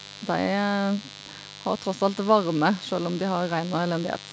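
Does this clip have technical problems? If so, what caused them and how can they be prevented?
Yes. Mains buzz runs through the whole clip, roughly 20 dB below the speech: switching spikes twice per 50 Hz cycle spray harmonics into a steady, raspy buzz. Prevent it with shielded, properly grounded cabling kept away from dimmers and power supplies.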